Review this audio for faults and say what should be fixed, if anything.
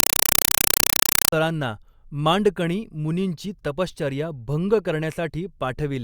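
From 0.0 to 1.33 s the speech is replaced by a compressed stream played as audio. Undecoded data frames arrive as loud 4 ms noise bursts repeating 31.25 times a second, which fits an AC-3 stream. On a spectrogram they show as full-band vertical stripes separated by empty gaps, and on the waveform as loud blocks. To prevent this, decode the bitstream before output, or send it only to a receiver that accepts compressed audio, so raw frames never reach a path that plays them as samples.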